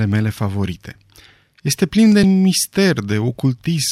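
From 0.12 s to 3.12 s the speech carries regular clicks every 1.0 s, likely clock drift buffer slips: mismatched clocks (about 150 ppm) drop or repeat a few samples.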